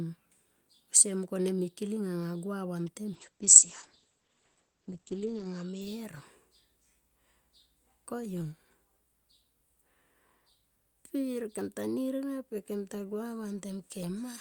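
Just after "gua vantem", at 3.14 s, a call bitrate drop sets in and lasts until 5.87 s. The encoder was starved of bits, which fits a fall from about 48 to about 10 kbps. High frequencies vanish above 8 kHz. The speech turns muffled and rough for about 2.3 s.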